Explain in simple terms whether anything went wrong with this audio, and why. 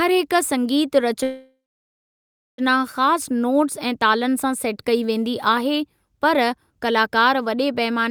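Call audio freeze, 1.23 to 2.61 s: the sound trails into a fading buzz, then about a second of silence, likely from delayed network data. It resumes exactly where it stopped.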